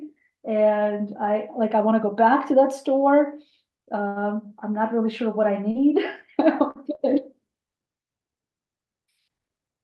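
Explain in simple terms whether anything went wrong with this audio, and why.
Two kinds of network fault affect this speech recording.

At 4.07 to 4.19 s there is a short stall from a late packet. A piece of audio arrived late, the receiver's waiting buffer ran dry, and it stretched the last sound for about 85 ms until the piece turned up. Playback then resumed where it left off, so nothing is lost, but that moment sounds held too long, and everything after it runs about 85 ms later.

At 5.71, 6.71 and 6.95 s there is short concealed packet loss. Each time, roughly 40 ms of audio never arrived. The receiver covered each gap by extending the sound just before it, copying its pitch or making matching noise, for about 36 to 43 ms, then blended back into the real audio. Each spot comes across as a brief smear or wobble, and a quick consonant there may be missing.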